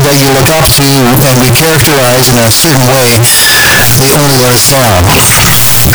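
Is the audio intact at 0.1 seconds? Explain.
No. At 0.1 seconds, as everywhere in this speech clip, the sound is a very loud, harsh distortion in which quiet stretches are as loud as the rest. This points to signed and unsigned mixed up, likely with 16-bit samples, so the top bit flips and every zero crossing jumps across the full range. The waveform would look like a solid band of large swings, and a spectrogram would show dense broadband energy from top to bottom.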